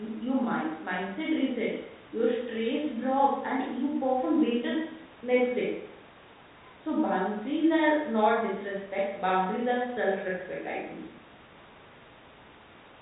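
Nothing goes wrong anywhere in this speech recording, which simply has the narrow telephone sound of G.711 coding, with nothing reaching above about 3.8 kHz.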